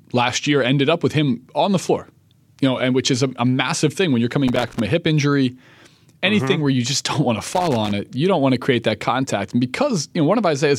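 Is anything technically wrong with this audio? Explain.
Yes. Loose connector crackle at 4.48–4.80 s, after "massive thing when you're", and 7.54–7.91 s, after "don't want to": a worn contact making and breaking chops the speech into irregular scratchy bursts.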